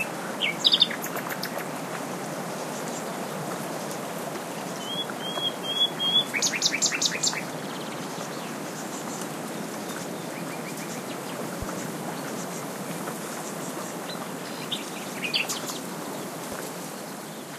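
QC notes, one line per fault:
11.62–11.65 s and 16.52–16.55 s, loud pop: two single, sharp pops, each under 30 ms and peaking roughly 10 dB above the surrounding sound, with the audio carrying on underneath both. Each one is most likely a sudden voltage step or pulse getting into the chain, say from a plug, switch, static discharge or a driver glitch, which the downstream circuitry shapes into a short hard click.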